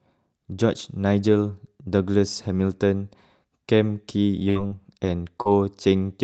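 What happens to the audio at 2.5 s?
Nothing goes wrong at 2.5 s: the speech continues intact through that moment, carried over the call path with its usual band-limited coding.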